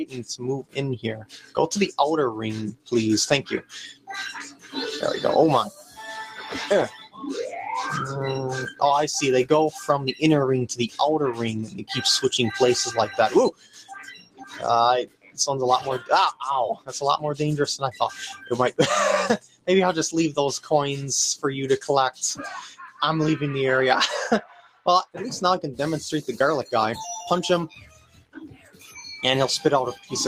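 A noise suppressor built for speech stays active for the whole clip, treating steady tones, ambience and decay as noise. Its gain keeps shifting by roughly 10 dB, so attacks come through while sustained sound sinks, giving a pumping, thinning quality.

Sound cut by the noise suppressor appears from 0.05 to 11.89 s, 13.51 to 25.15 s and 27.68 to 30.12 s. Held and fading material drops by up to about 19 dB for roughly 3, 4 and 1.5 s in total in these spans, so tails are chopped short.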